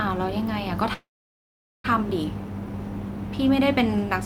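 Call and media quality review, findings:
Call audio freeze 0.93–1.86 s: fading buzz, then 0.8 s silence; speech resumes intact, 0.91 s late. Likely jitter buffer underrun from delayed packets.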